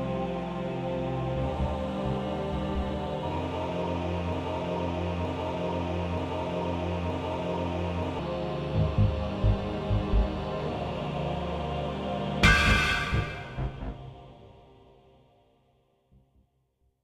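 From 4.33 s to 8.19 s, a fragment of about 0.93 s plays four times in a row, identical each time, like a broken-record loop. The likely cause is a stalled player or stream resending its last buffered piece, so the intended audio there is lost.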